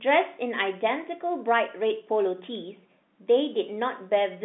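No technical faults can be heard in the recording. The speech carries the narrow sound of a G.711 telephone line, with the band running from about 200 Hz to 3.6 kHz and nothing above 3.8 kHz.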